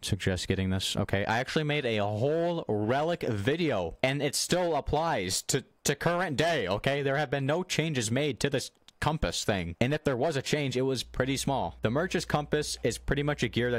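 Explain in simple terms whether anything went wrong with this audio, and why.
Mains hum starts at 11.03 s and lasts to the end: a steady 60 Hz drone from power wiring leaking into the signal.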